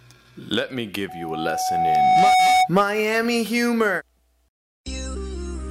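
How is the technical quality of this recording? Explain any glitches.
The recording has one clear fault. From 1.08 to 2.69 s there is loudspeaker feedback squeal: a microphone-speaker loop feeds a 744 Hz tone that swells over a second and a half to about 10 dB above the sound. A steady hum would not grow the way this does.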